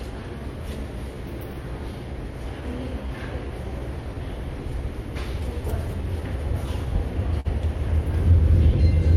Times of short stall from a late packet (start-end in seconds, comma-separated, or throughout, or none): 7.40-7.47